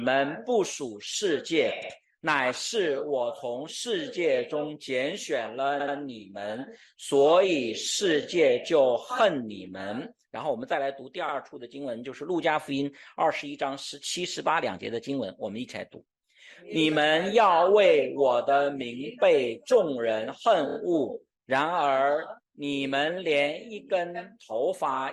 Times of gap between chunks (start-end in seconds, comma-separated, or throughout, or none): none